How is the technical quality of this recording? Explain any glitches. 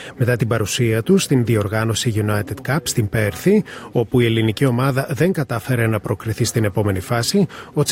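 Nothing here needs explaining: the recording runs without a single glitch, dropout or stray noise anywhere along the way.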